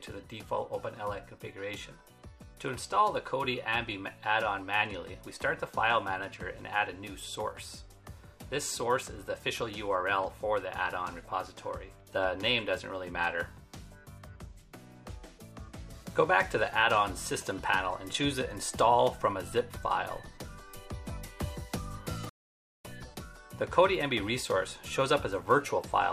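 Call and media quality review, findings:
Stream reconnect, 22.29–22.85 s. Audio drops to silence for 0.54 s, then resumes about 0.4 s further on, skipping that stretch. Probable component: network/stream client. Connection dropped; player reconnected and restarted the decoder mid-stream.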